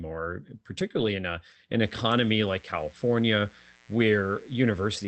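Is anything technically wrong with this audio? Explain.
Yes, two faults are audible in this speech clip.

At about 0.99 s, just before "in a an", there is a lost packet rebuilt from error correction. One 20 ms packet went missing, and the decoder filled it from a low-bitrate copy carried in the next packet, so nothing drops out. That stretch turns briefly grainier and noisier. On a spectrogram it shows as a thin vertical strip of smeared, hissier texture with no silent gap. The waveform stays continuous.

From about 1.83 s, right after "in a an", to the end of the clip, there is mains buzz. Sharp switching spikes, twice per 60 Hz cycle, leak into the signal and generate a dense series of 60 Hz harmonics reaching up into the kilohertz range. The result is a steady, raspy buzz about 30 dB below the speech. A spectrogram shows evenly spaced horizontal lines at 60 Hz multiples starting at that point, up to the call path's 8 kHz cut-off. 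The waveform's quiet passages carry a fine periodic fuzz.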